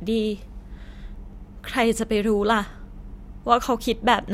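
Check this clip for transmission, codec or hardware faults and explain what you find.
Nothing in this speech recording points to a transmission, codec or hardware problem.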